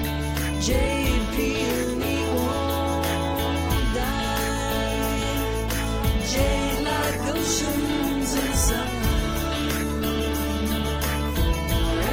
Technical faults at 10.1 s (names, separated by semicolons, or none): call bitrate drop